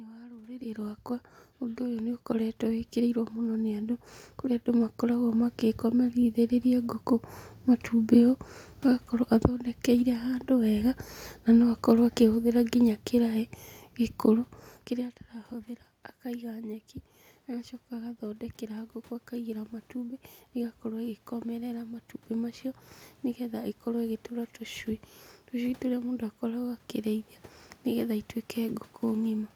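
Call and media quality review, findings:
Clock slip clicks, 0.18 s to 29.55 s: faint regular ticks, roughly seven a second and around 200 in all, through the whole clip. Likely two unsynchronised device clocks, one dropping or repeating a single sample per slip, which points to a mismatch near 150 ppm.

Automatic gain rising, 1.6 s to 8.35 s: speech and room noise swell together by about 10 dB over several seconds. The AGC judged the input too quiet and ramped its gain. This is separate from the talker's level shifts near 0.5 s and 14.5 s.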